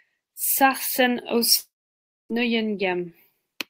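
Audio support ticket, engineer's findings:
Long network dropout, 1.57 to 2.32 s. Speech cuts out; last sound smeared into a short fading buzz by the receiver's loss concealment, then about 0.6 s of near-silence. Roughly 0.72 s of audio never delivered, so playback resumes at 2.32 s with that stretch missing, not delayed. Likely cause: packet stream interrupted upstream (network path or jitter buffer starvation). Check transport logs around this window.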